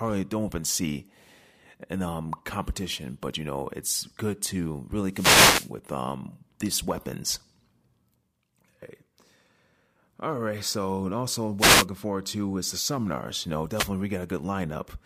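Wireless microphone noise hits occur at 5.11–5.72 s after "it's good to really", 11.58–11.86 s between "right so also" and "forward to is the", and 13.74–13.88 s. Each is a brief swish of static over the speech, where the FM radio link faded and receiver noise surfaced.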